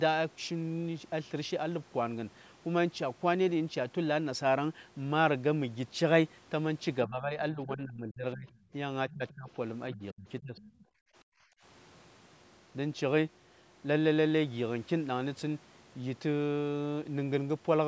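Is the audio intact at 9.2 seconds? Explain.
No. From 9.09 to 9.49 s there's speech suppressed in double talk: the talker dips by around 25 dB, likely because the echo canceller ducked both voices at once. Over 9.1 to 9.51 s you also get the other side's voice leaking through, roughly 20 dB under the talker, likely loudspeaker echo the canceller didn't fully remove.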